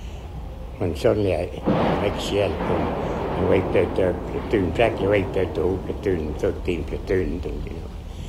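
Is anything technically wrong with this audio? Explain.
No, I hear nothing technically wrong with this audio.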